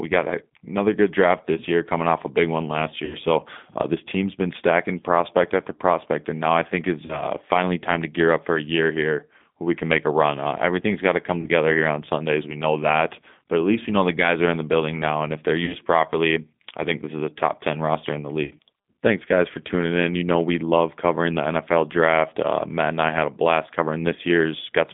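Throughout, the speech carries G.729 codec damage: plainly audible roughness and a slightly synthetic texture, because the decoder rebuilds each 10 ms frame from a vocal tract filter, a pitch predictor and a handful of pulses at 8 kbit/s. The band is confined to roughly 150 Hz to 3.6 kHz, so sibilants and upper harmonics are missing.

VoIP packet loss concealed by the speech codec occurs five times. At 3.05 s, just after "a big one last", the decoder covers a gap of about 60 ms, which fits two lost packets. It extrapolates from its last pitch and filter, so the sound smears into a buzzy tone or coloured noise that fades. Shorter single-packet gaps of about 30 ms follow at 7.06 s and 11.41 s. At 15.65 s another falls between "now and if they're" and "properly I think this". A 60 ms gap comes at 18.45 s after "ten roster in the". Each disturbance runs roughly 70 to 180 ms, longer than the loss itself, because every frame builds on the previous one and the speech stays weak until the decoder recovers.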